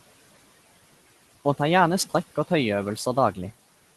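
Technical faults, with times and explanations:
Throughout, noise suppressor artifacts: the steady room noise is pulled down by about 16 dB in the gaps, then rises again under the speech as the suppressor releases those bands.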